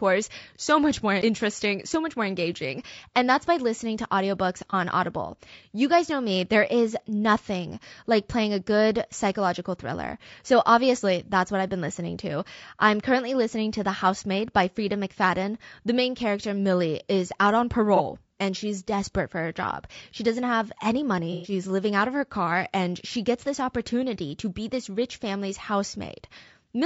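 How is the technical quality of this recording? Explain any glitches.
The recording has audible codec damage throughout and three brief dropouts.

Low-delay AAC compression, throughout: the speech sounds rough and grainy, with noise between the harmonics, likely from AAC-ELD at 32 kbps, whose short frames resolve pitch poorly.

AAC frame loss with concealment, at 4.70–4.74 s after "by listening to audiobooks", 17.96–18.01 s between "is out on" and "and she's desperate for", and 21.32–21.52 s between "doesn't have any" and "living out of her": the decoder patches each gap from the last good spectrum. The first two fill about 30 ms each and sound like brief smeared, noisy blips. The last fills about 120 ms and is a longer phasey, blurred patch.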